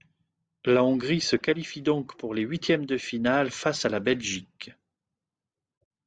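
Nothing stood out as a technical fault on listening to the speech recording.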